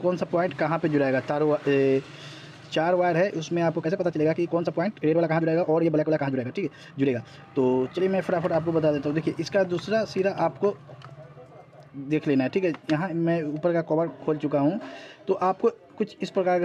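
The audio has a time-stretched section from 3.74 to 8.02 s. There the pace jumps abruptly to about 1.48 times normal speed, while the pitch stays where it was. The passage sounds rushed, with short pieces seemingly dropped out to squeeze it shorter. At 8.02 s the pace snaps back. The likely cause is software compressing that stretch to fit a set length, cutting material to hold the pitch steady.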